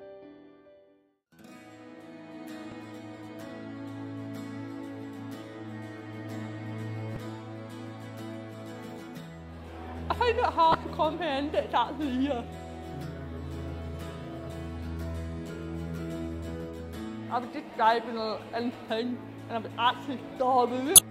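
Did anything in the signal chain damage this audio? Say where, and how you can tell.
Yes. The codec stage was hit by damaged data in the compressed stream. At several points the bitstream contains corrupted bytes, so the decoder misreads the affected frames, loses sync and has to hunt for the next valid frame header. Each time, this produces a brief chirp or blip that breaks into the sound: a very short one at 2.71 s, then slightly longer ones at 7.13–7.17 s, 10.71–10.75 s and 20.95–20.99 s.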